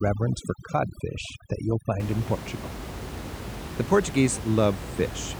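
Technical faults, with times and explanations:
0.0–2.0 s, overdone noise removal: a noise reducer set too strong mutes bands near its noise estimate, pushing the room noise, about 10 dB below the speech, to twinkling near-silence.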